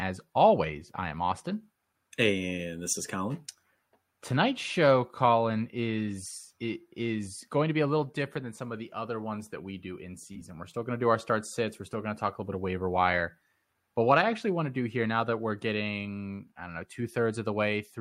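No technical faults are audible anywhere in the speech.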